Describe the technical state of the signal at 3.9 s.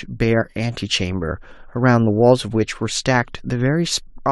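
A brief glitch cuts through the speech at 3.91 s. This is damaged data in a compressed stream: corrupted bytes make the decoder misread the frame, lose sync and skip forward to the next valid frame header.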